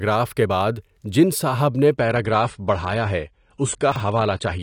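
At 1.98 s the adaptive stream drops to a lower bitrate, consistent with a fall from about 96 to 32 kbit/s; the treble vanishes above 10 kHz and the speech turns duller through the end. From 3.92 to 4.00 s, chunks play out of order: a 40 ms chunk lands one position late, causing a brief jumbled moment.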